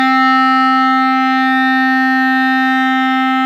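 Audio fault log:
Nothing to log here: this little bit of music comes across without any fault worth noting.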